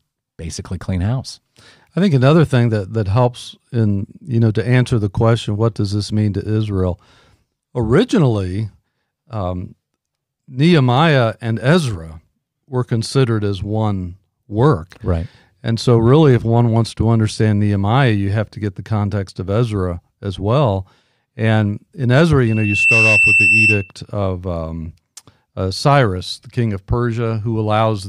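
A single piercing tone at about 2.7 kHz rises out of the speech at 22.46 s, swelling to full strength within roughly 0.4 s and settling about 5 dB above the voice before it stops at 23.92 s, just before "of um". This is loudspeaker feedback squeal: the microphone caught its own loudspeaker, and around 2.7 kHz the loop gain passed one, so that frequency fed on itself and climbed.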